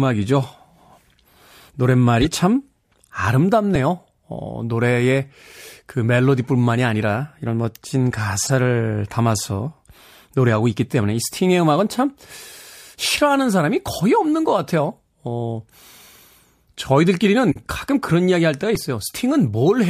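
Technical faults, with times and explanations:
2.22–2.28 s, 8.42–8.50 s, 12.41–12.53 s, 17.51–17.57 s and 18.75 s: corrupt frame decoded. Bit-damaged compressed frames, a few at a time, were decoded anyway, putting energy at wrong frequencies as brief chirps or noise bursts. They peak near −10 dBFS; the one at 12.4 s is quieter, near −25 dBFS.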